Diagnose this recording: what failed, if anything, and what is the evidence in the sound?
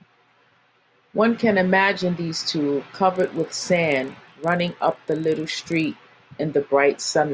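The resampler restarted on every block, in the driver or buffer stage. From 3.16 to 5.96 s a 25 Hz buzz rides on the speech. It fits 40 ms blocks converted separately, likely 48 kHz to 16 kHz. Each block edge lacks its true neighbouring samples, leaving a small error.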